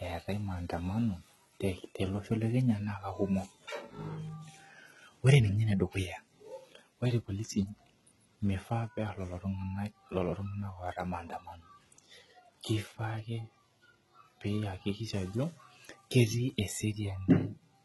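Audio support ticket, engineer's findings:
Gritty, lispy sibilants and a metallic, synthetic-sounding top end throughout the speech; nothing above 11.8 kHz. Treble sounds rebuilt rather than captured, with harmonics not lining up across the crossover. Likely cause is HE-AAC compression: the lower band is coded, the upper band is regenerated by spectral band replication under a coarse envelope. Heavy damage fits a low bitrate around 16 kbps.

Faint hiss and roughness from 0.0 to 1.5 s, tracking loud, bright passages and absent in pauses. Sample clock jitter in the converter clock: timing wobble on the order of a microsecond gives an error proportional to waveform slope, roughly 50 dB below the signal.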